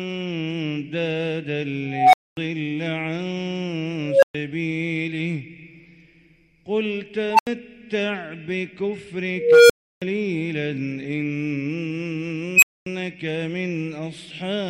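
An unstable filter fault recurs five times, at 1.89 to 2.37 s, 4.03 to 4.35 s, 7.31 to 7.47 s, 9.36 to 10.02 s and 12.56 to 12.86 s. Each time, a recursive filter feeds its own output back with gain above unity, so a tone near 700 Hz, 500 Hz, 1 kHz, 500 Hz and 3 kHz in turn swells over 0.06 to 0.33 s into a loud, clipped squeal. The tone then cuts to silence for 0.08 to 0.32 s until the filter resets.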